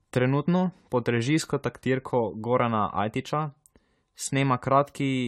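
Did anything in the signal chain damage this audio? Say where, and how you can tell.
Yes, at the codec stage, throughout the clip. This is generation loss. The speech sounds swirly, hollow and smeared, and consonant attacks blur. Nothing sits above 16 kHz. The damage points to around ten passes through AAC-LC at 96 kbit/s, likely from repeated re-encoding, with each pass adding fresh quantisation noise.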